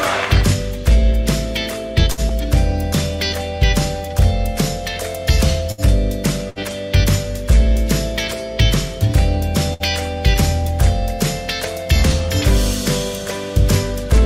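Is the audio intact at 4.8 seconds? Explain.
Yes, the audio is intact at 4.8 seconds, with no dropout, click, distortion or other fault at that moment.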